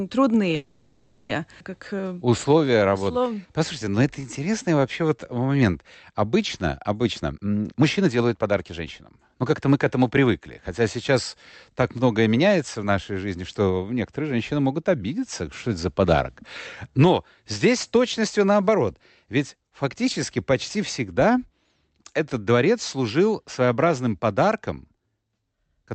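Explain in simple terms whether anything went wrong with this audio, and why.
Three problems show up early in this speech recording.

A call audio freeze runs from 0.55 to 1.31 s. The sound stalls and is stretched into a fading buzz or hiss for about three quarters of a second. The likely cause is packets held up in transit, draining the receiver's buffer. When they arrived, the speech resumed where it stopped, so nothing was lost, only delayed.

A jitter buffer slow-down follows from 1.85 to 5.53 s. To rebuild its reserve, the receiver repeated tiny slices of the sound many times over. That adds roughly 0.45 s, so this stretch plays at about 88% speed. The pitch stays the same, but sounds are drawn out.

A jitter buffer speed-up runs from 7.05 to 10.12 s. With too much audio queued, the receiver trimmed many short slices, cutting around 0.7 s. The speech plays at about 124% speed at unchanged pitch and sounds rushed.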